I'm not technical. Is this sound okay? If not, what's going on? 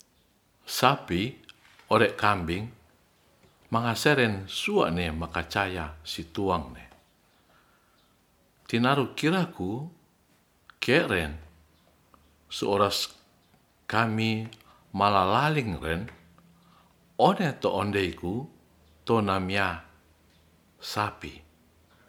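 Yes, no faults heard.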